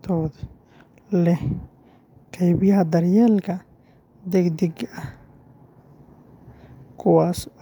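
No technical faults are audible.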